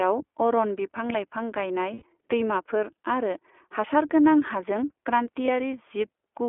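The whole clip runs through the iLBC codec. The speech is confined to a 300 Hz to 3.4 kHz telephone band. Each 20 ms frame is coded on its own. The rough, synthetic edge is plainly audible, which fits the 15.2 kbps mode.

Lost iLBC frames occur from 1.94 to 2.03 s and from 5.46 to 5.49 s. The first gap fits four missing frames. The decoder fills each gap by repeating the last pitch cycle mixed with noise. The result is a brief, buzzy, held vowel, and the voice is right again almost at once afterwards.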